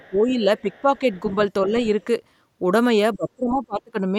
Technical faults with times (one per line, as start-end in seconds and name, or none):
0.00-1.03 speech suppressed in double talk
0.02-0.19 other side's voice leaking through
0.57-1.35 other side's voice leaking through
1.66-2.07 speech suppressed in double talk
1.81-2.04 other side's voice leaking through
3.15-4.19 speech suppressed in double talk